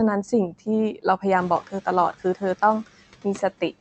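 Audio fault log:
1.37–1.58 s: noise suppressor catching up. The room noise jumps by about 16 dB around 1.5 s and first comes through with less reduction. It then sinks by about 6 dB over 210 ms as the noise estimate adapts.
1.62–1.87 s, 2.13–2.42 s, 2.84–3.74 s: speech cut by the noise suppressor. The suppressor mistook parts of the speech for noise, so brief stretches drop by up to about 17, 14 and 18 dB and sound swallowed. Here the speech itself dips along with the background.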